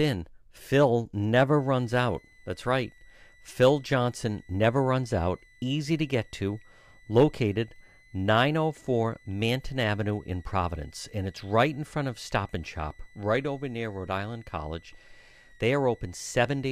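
From 1.54 s to the end of the clip, a switching power supply drops into a low-frequency burst mode that falls inside the audible range, producing a switching supply whistle. Its switching energy leaks into the audio path as a thin, high tone near 2 kHz, wandering between 1.9 and 2.04 kHz, sitting roughly 35 dB below the speech. It is quiet but continuous, a faint steady whine riding under everything said.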